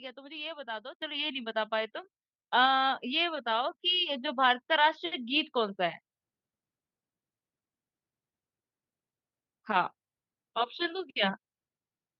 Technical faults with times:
1.02 microphone volume stepped up
2.04 microphone volume stepped up

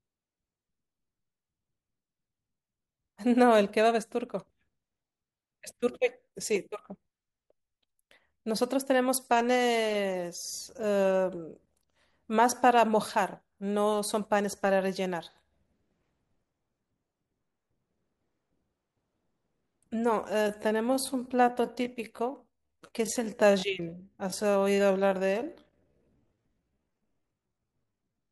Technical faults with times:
20.24-28.32 time-stretched section

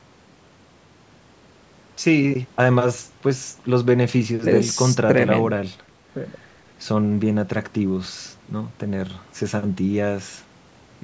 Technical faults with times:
none

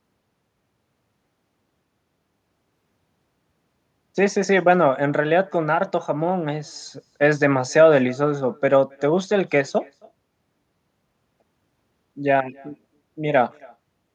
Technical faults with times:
0.00-14.14 echo with no canceller

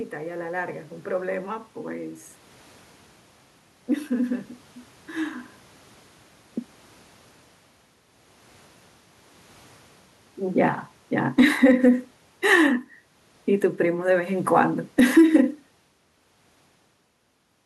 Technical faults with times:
10.56-11.68 automatic gain falling
11.59-12.17 automatic gain rising
13.80-15.21 automatic gain falling

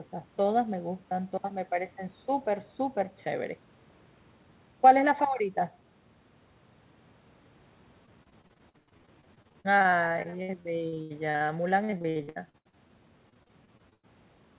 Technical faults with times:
8.06-12.91 repeated packet loss (robotic sound)
13.29-14.05 repeated packet loss (robotic sound)

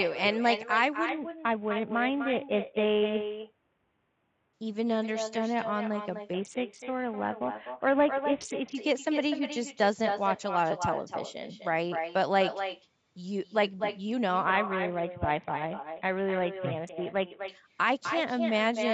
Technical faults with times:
0.00-18.93 echo with no canceller
1.09-4.53 Bluetooth SBC bit pool drop
6.33-8.75 Bluetooth SBC bit pool drop
14.45-17.48 Bluetooth SBC bit pool drop

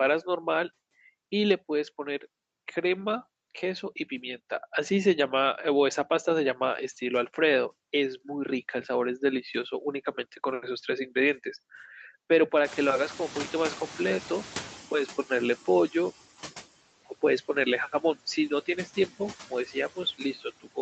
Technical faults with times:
0.00-20.82 noise suppressor artifacts
12.64-16.11 noise suppressor catching up
19.50-20.82 speech cut by the noise suppressor

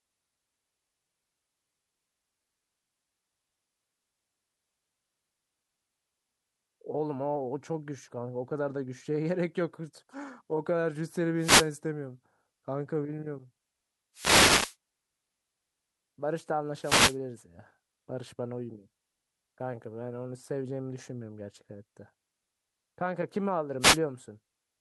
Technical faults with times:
11.38-11.70 wireless microphone noise hit
14.14-14.76 wireless microphone noise hit
16.81-17.17 wireless microphone noise hit
23.80-23.99 wireless microphone noise hit

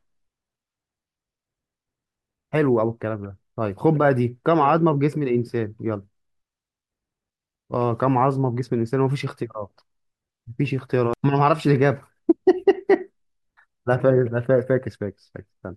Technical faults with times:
7.55 damaged data in a compressed stream
11.13 damaged data in a compressed stream

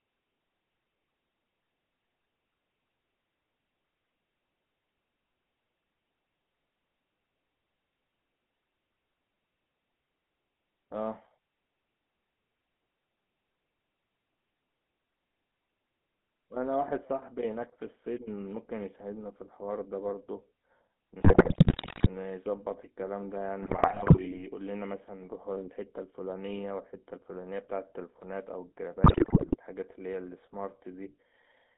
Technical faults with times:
0.00-31.77 GSM full-rate codec
21.20-22.07 GSM bit errors
23.62-24.43 GSM bit errors
29.04-29.56 GSM bit errors

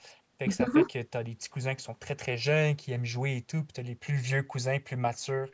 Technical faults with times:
none

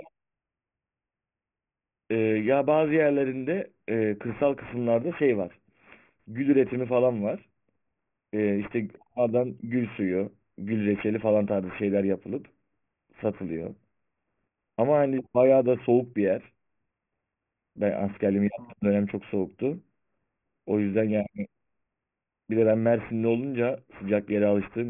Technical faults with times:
0.00-24.89 aliasing

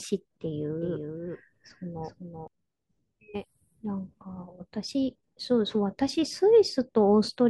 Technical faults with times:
0.82-2.48 doubled audio track

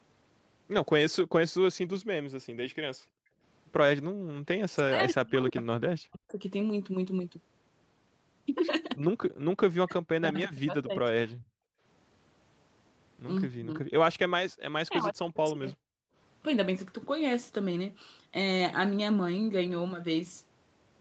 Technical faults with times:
2.96-4.28 background gated by the echo canceller
4.73-6.40 speech suppressed in double talk
5.56-6.31 echo leak
9.79-11.06 speech suppressed in double talk
11.34-11.83 background gated by the echo canceller
13.57-13.88 speech suppressed in double talk
14.89-15.68 speech suppressed in double talk
15.96-16.15 background gated by the echo canceller

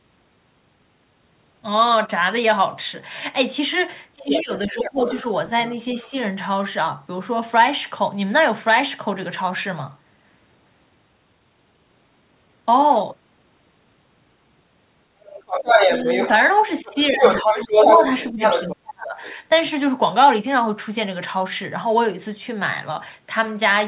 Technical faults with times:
4.16-5.07 speech suppressed in double talk
4.18-6.12 other side's voice leaking through
6.03-6.12 speech suppressed in double talk
15.22-19.37 other side's voice leaking through
16.83-19.21 speech suppressed in double talk

